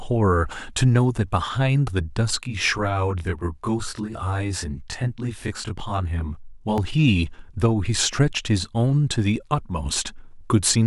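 From 2.43 s to 6.78 s the speech turns rough and slightly doubled, a clear case of channel delay causing comb filtering. One channel arrives roughly 20 ms late and the two sum to mono, cancelling at evenly spaced frequencies. A spectrogram shows fixed horizontal notch stripes from around 20 Hz upward.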